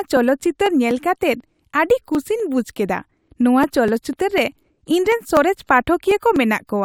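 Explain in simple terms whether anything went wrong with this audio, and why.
Periodic USB or driver dropouts run through this speech from about 0.17 s to 6.61 s. Every 0.248 s, roughly four times a second, a regular tick cuts into the sound. Some background task on the computer seems to have briefly stalled the USB connection or the audio driver on a fixed schedule. Each time, a couple of milliseconds of audio were simply skipped, and the jump across that gap is what makes each tick.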